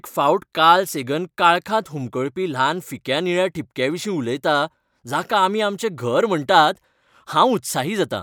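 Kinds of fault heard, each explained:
The speech signal holds steady throughout, with nothing audible that points to a technical fault.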